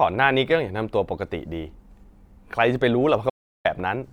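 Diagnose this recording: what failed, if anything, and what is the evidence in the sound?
The speech stops dead at 3.30 s for 350 ms. Pure silence, no room tone. An audio dropout to silence, likely a lost input connection.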